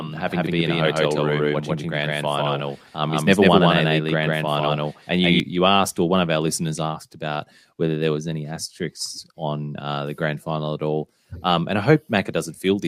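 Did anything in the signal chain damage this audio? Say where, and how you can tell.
Yes. From the start to 5.4 s, just before "you asked or one", every syllable has a dry, equally loud repeat roughly 150 ms behind, ending abruptly. This doubled audio track likely comes from a second, slower capture or routing path mixed in.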